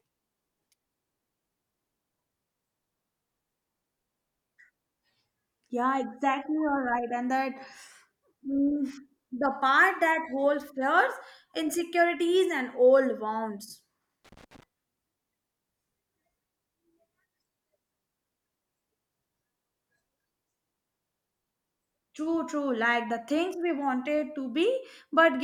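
Right after "insecurities and old wounds", from 14.25 to 14.63 s, there's loose connector crackle: a dodgy contact chopping the signal into a scratchy, irregular burst.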